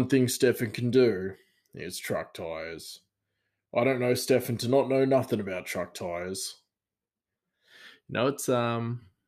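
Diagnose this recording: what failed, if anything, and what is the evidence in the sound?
Nothing failed in this recording.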